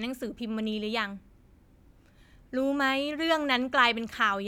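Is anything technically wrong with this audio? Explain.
No, nothing technical stands out here; the speech comes through just as it should.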